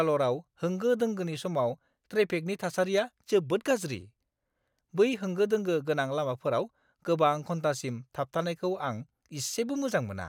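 No technical faults can be heard anywhere in the speech recording, with the signal holding steady throughout.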